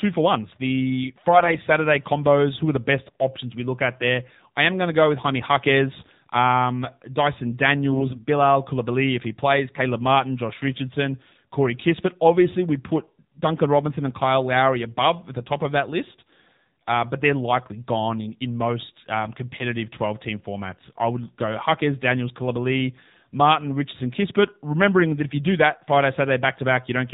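Throughout, the speech sounds buzzy, thin and synthetic, with nothing above 4 kHz. That is the AMR narrowband mobile codec: the voice is rebuilt from a vocal-tract model fed by sparse pulses, and the plainly audible damage fits a low mode around 7.4 kbps.

From 1.34 to 1.57 s, from 3.08 to 3.15 s and from 7.92 to 8.25 s, the voice briefly turns hoarse, scratchy and gargly while keeping roughly its pitch and level. These are AMR bit errors: a few percent of the weakly protected bits arrived flipped, misplacing the excitation pulses and skewing fine gain and spectral values.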